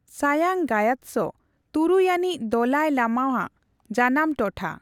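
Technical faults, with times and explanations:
Nothing in this speech recording stood out as a technical problem on listening.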